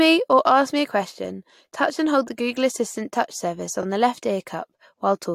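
At 3.82 to 3.84 s, between "assistant touch surface" and "the left", a 21.3 ms block of compressed data, consistent with a single codec frame, was played twice. These repeated frames make a tiny stutter and add 21.3 ms to the audio.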